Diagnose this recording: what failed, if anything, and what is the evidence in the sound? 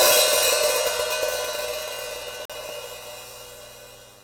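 Digital broadcast dropout at the receiver: the sound mutes from 2.45 to 2.53 s, losing about 43 ms. That fits one bad frame being muted until clean frames return.

Chunks out of order, probably in the buffer: around 2.66 to 2.70 s a 10 ms chunk plays three chunks late, giving a brief jumbled moment with hard joins.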